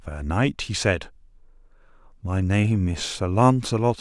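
No technical faults can be heard anywhere in the speech. Nothing in the recording needs a timestamp or a fault description.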